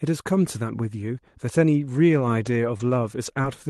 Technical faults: lost packet rebuilt from error correction; short concealed packet loss

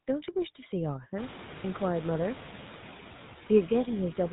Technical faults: noise suppressor artifacts; GSM full-rate codec

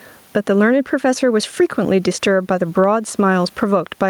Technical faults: gain pumping

